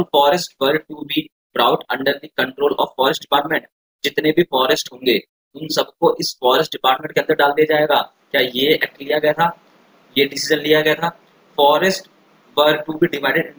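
Crude rate conversion runs throughout: samples were repeated without filtering, consistent with a 32 kHz to 48 kHz change, leaving inharmonic fizz about 25 dB below loud, bright passages.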